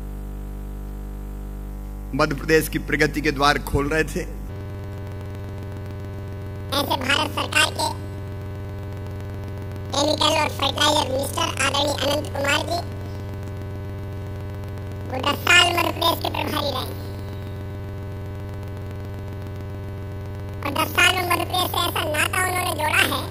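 From 4.49 s to the end, planar audio read as interleaved: 46.44 ms channel blocks each play twice at double speed, sounding an octave high with a 21.5 Hz flutter.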